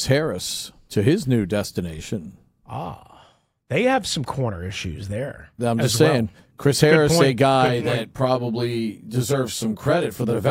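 Channel delay (comb filtering) sets in at 7.67 s and runs to the end of the clip. One channel arrives roughly 20 ms behind the other, and when the two are summed to mono the shared speech cancels at evenly spaced frequencies, starting around 20 Hz and repeating through the spectrum. The result is a rough, slightly doubled sound.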